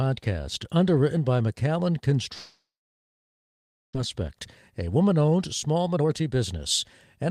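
A long network dropout runs from 2.33 to 3.97 s in this speech clip. The last sound is stretched into a fading buzz, then about 1.3 s of near-silence follows, and speech resumes with roughly 1.1 s missing, likely because packets stopped arriving. A jitter buffer speed-up follows from 4.81 to 6.54 s. The receiver repeatedly trims pitch-period-sized slices to work off the backlog, so speech plays at about 117% speed with unchanged pitch and sounds hurried, shedding roughly 0.3 s in total.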